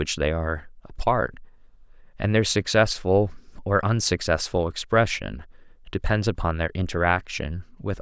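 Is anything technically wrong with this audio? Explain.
No, nothing technically wrong turns up anywhere in this speech recording.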